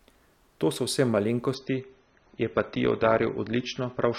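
At 1.55 s the quality drops abruptly with no gap, and it stays low to the end. That's an adaptive stream switching to a lower bitrate, probably because the connection slowed and the player picked a leaner version. Above 6.3 kHz the speech is empty, so it turns dull, and codec artefacts rise. The sound fits a move from about 96 kbit/s AAC down to roughly 27 kbit/s.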